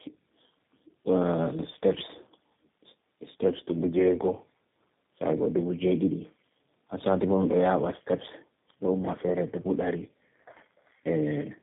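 Tandem speech coding runs throughout. The speech sounds like three low-rate codecs in a row, roughened, muffled and warbly, with nothing above 3.8 kHz.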